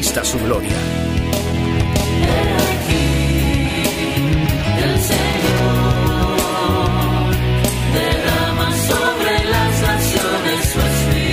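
Loose connector crackle breaks up the audio from 1.41 to 1.84 s and from 5.31 to 5.60 s. A worn contact is making and breaking, chopping the signal into scratchy bursts.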